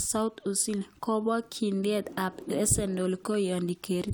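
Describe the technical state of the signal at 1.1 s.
At 1.1 s the signal is intact, with no audible technical fault at that moment.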